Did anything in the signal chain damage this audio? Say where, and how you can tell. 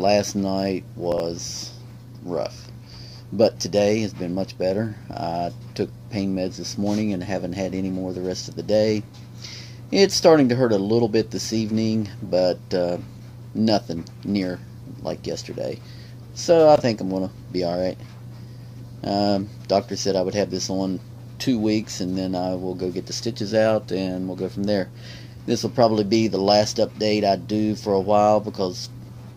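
Yes: chunks out of order at the buffer stage. A 20 ms chunk plays three chunks late at 1.12–1.20 s and one chunk late at 16.76–16.80 s, giving brief jumbled moments. The waveform shows hard steps at each join, which appear as thin vertical broadband lines on a spectrogram.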